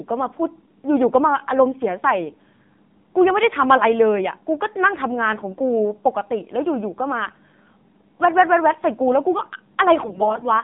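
Throughout, the speech has passed through the AMR narrowband mobile codec. The signal was cut to telephone bandwidth, roughly 150 Hz to 3.6 kHz, and rebuilt from a coarse vocal-tract model driven by sparse pulses. The thin, buzzy, synthetic tone fits a low mode near 7.4 kbps. Codec damage is plainly audible: the voice sounds boxy and processed, with no air or sibilant detail above the band edge.

From 10.02 to 10.49 s, AMR bit errors appear near the end. The link corrupted the weakly protected bits of successive frames, roughly one bit in ten, while the core checksum kept passing, so the decoder played the damaged frames rather than muting them. Wrongly placed excitation pulses and skewed gain and spectral values make the voice turn hoarse, scratchy and gargly for nearly half a second. Its pitch and loudness stay roughly intact. The damage fits around twenty corrupted frames.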